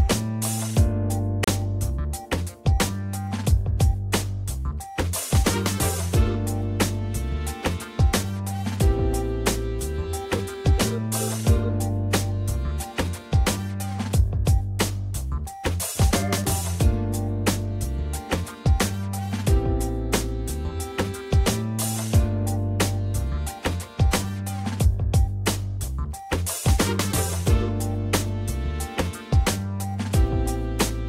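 Wireless interference likely delayed packets until the headphone buffer emptied, a Bluetooth stall that silences the audio for 34 ms, from 1.44 to 1.48 s, before playback resumes.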